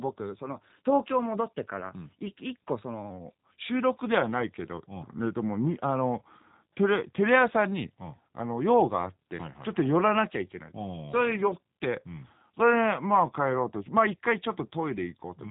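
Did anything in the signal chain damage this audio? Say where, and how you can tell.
Yes. The codec stage shows G.729 coding throughout: speech sounds rough and synthetic, with nothing above 3.8 kHz, consistent with 8 kbit/s frame-based vocal-tract and pulse modelling.

From 3.10 s to the end, a section at the wrong speed plays at 0.893 times speed, with pitch about two semitones lower, likely from a playback or editing clock mismatch.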